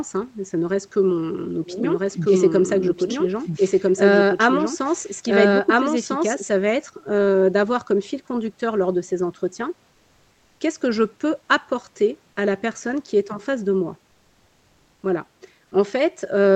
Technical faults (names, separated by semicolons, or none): doubled audio track; comfort noise in place of the background